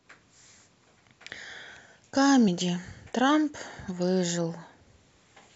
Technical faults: compressed frames skipped

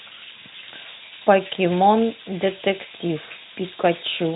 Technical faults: none

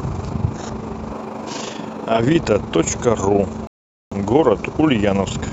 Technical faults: switch to a distant microphone; rebuffering stall

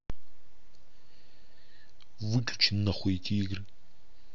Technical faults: none

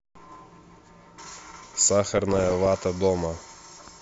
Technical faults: DAB burbling

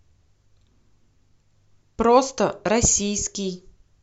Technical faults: none

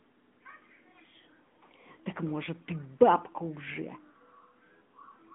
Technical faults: AMR narrowband mobile codec

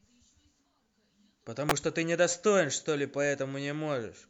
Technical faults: electrical switching spike

